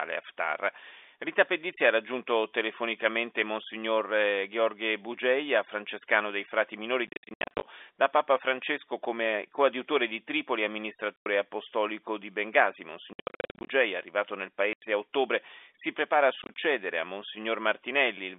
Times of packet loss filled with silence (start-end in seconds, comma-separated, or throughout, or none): 7.07-7.63, 11.16-11.26, 13.13-13.69, 14.73-14.82, 16.42-16.54